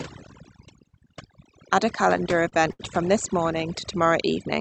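A speech recording with two faults. Overdone noise removal runs through the whole clip. The suppressor was set aggressive enough to drive individual frequency bands to near zero whenever they approached its noise estimate, so the background collapses to near silence with twinkling residual specks, and the quieter components of the voice are stripped out with it. The audio also arrives through a call codec whose upper limit sits around 8 kHz, consistent with an Opus wideband setting. Between 2.17 and 2.81 s there are repeated stalls (stutter). Packets arrived late or slower than playout, and the jitter buffer drained six times in that span. Each time, the receiver extended the last sound until data resumed, filling about 138 ms in total, roughly a fifth of the span, with the longest hold at 72 ms. Nothing is lost outright, but that stretch drags and stutters.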